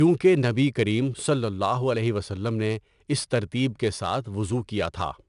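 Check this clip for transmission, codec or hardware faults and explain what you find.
One codec fault runs the whole length of the speech: 4-bit ADPCM compression. Each sample is coded as a coarse 4-bit step from a predicted value, so the error rises and falls with the signal, giving a gritty hiss riding on louder syllables and roughness on sharp onsets. Nothing is present above 10.6 kHz, which points to a sample rate near 22 kHz and about 89 kbps. Unlike MP3-style artefacts, there is no swirling or pre-echo, only level-tracking grit.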